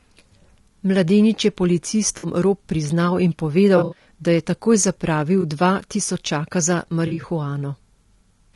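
Throughout, the speech sounds rough and grainy, with noise filling the gaps between harmonics and a thin, synthetic-sounding top band. This is likely low-delay AAC compression (AAC-ELD), whose short frames resolve pitch poorly, at a bitrate around 32 kbps. Brief smeared, noisy patches interrupt the speech at 2.17 to 2.27 s, at 3.77 to 4.07 s just after "priznal in" in a broken cluster, at 5.41 to 5.44 s just before "dva tisočaka", and at 7.07 to 7.25 s. These are AAC frame loss with concealment, where the decoder rebuilt missing frames from the last good spectrum.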